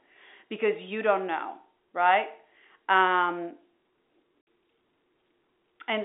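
At 4.42 s the speech drops out for 60 ms of silence: packet loss filled with silence, where the receiver substituted silence for missing packets. The gap fits two lost 30 ms packets, and it has abrupt edges within the band-limited G.711 telephone sound.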